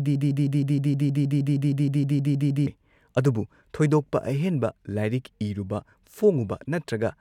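Speech that opens in a broken-record loop: from the very start until 2.67 s, a fragment about 157 ms long repeats exactly, back to back, some 16 times. The likely cause is a stalled player, encoder or stream resending its last buffered piece, so the speech due in that span is lost.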